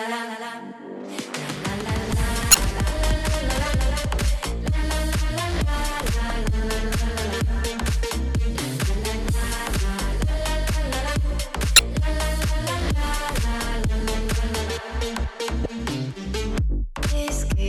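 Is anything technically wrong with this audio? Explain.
Yes, there are two problems.

From the very start until 4.44 s, a doubled audio track is present: the same sound plays twice, with a second full-band copy trailing roughly a third of a second behind and about 5 dB quieter. The likely cause is a second, slower capture path or an edit leaving two copies out of step. Unlike echo or reverb, the copy has no decay or room colouring, and it cuts off abruptly at 4.44 s.

There is also damaged data in a compressed stream at 2.51 to 2.55 s, 6.27 to 6.31 s, 11.76 to 11.79 s and 15.62 to 15.66 s. Each time, corrupted or missing bytes make the decoder misread frames and lose sync until it finds the next valid frame header. The result is a short chirp, squawk, click or hole of about 35 ms.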